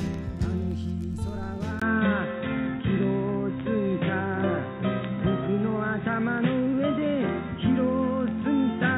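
At 1.80 s there is a 20 ms gap, then the sound turns dull and boxy until the end. Nothing reaches above 3.8 kHz. The level shifts noticeably, and new background noise sits well beneath. The input likely switched to a poorer device.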